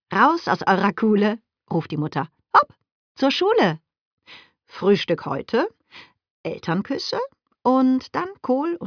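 Nothing here trips up the listening ear, with no faults showing up anywhere along the way.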